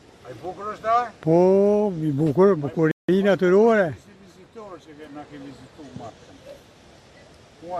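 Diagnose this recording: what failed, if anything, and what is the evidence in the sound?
The playback stage failed with a rebuffering stall. At 2.91 s the sound drops to silence for about 0.17 s, then carries on from exactly the point where it stopped at 3.09 s. Nothing is skipped. The player ran out of downloaded audio and waited for more data, adding roughly 172 ms to the running time.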